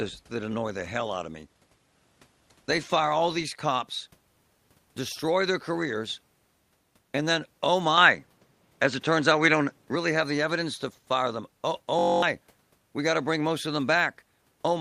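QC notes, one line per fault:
7.98–9.95 s, input switched to a poorer device: sound turns duller, cut off above 8.6 kHz, about 5 dB level shift, fresh noise floor; likely a device change, not EQ.
11.99–12.22 s, system hang loop: one 21.33 ms slice repeats exactly, fitting a 1024-sample buffer, giving a steady 46.9 Hz buzz and about 0.2 s lost.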